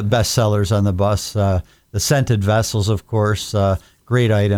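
No technical faults can be heard in the speech.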